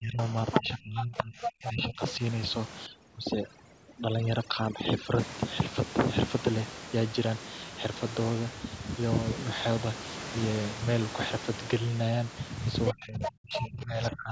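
Speech suppressed in double talk, from 0.0 to 0.36 s and again from 0.6 to 2.01 s: the voice dips by about 20 dB, then about 25 dB. The likely cause is an echo canceller that could not separate the near talker from loudspeaker echo while both sides spoke, so it turned both down together.

Other side's voice leaking through, at 0.52 to 0.62 s and 1.42 to 1.48 s: short scraps of a second voice sit only about 10 dB, then about 5 dB, under the talker. These are likely loudspeaker playback that the echo canceller failed to remove from the microphone signal.

Overdone noise removal, from 2.86 to 5.19 s: noise reduction set too aggressively against the room noise cuts away frequency bands whenever they come near its noise estimate. Quiet parts of the voice go with them, so the background drops and breaks up into twinkling specks.

Other side's voice leaking through returns at 12.87 to 12.91 s, just before speech suppressed in double talk runs from 12.92 s to the end. 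That suppression is the deepest in the clip, at about 30 dB. Within it, more leaked fragments of the far voice, about 5 dB below the talker, break through at 13.24 to 13.31 s and 13.56 to 13.62 s. The likely cause is the same double-talk confusion in the echo canceller.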